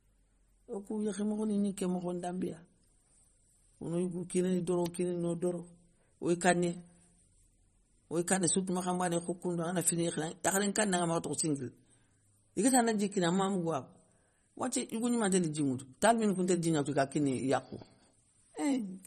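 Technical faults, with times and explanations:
Throughout, MP3 compression. Nothing is present above 14.5 kHz, a hard treble cut-off. The damage is plainly audible. Weak frequency components flicker from frame to frame, so the speech sounds watery and swirly. This likely comes from MP3 encoding at a low bitrate near 32 kbps.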